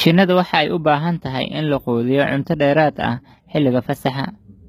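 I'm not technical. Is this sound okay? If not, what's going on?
No. The speech has HE-AAC compression damage that is plainly audible for the whole clip. The treble has a brittle, synthetic edge, and s sounds come out gritty and lisping. The likely cause is a low-rate HE-AAC encode. That codec keeps only the lower part of the sound and fakes the top by copying lower bands upward, so the rebuilt treble doesn't match the voice. Nothing at all survives above about 14.9 kHz.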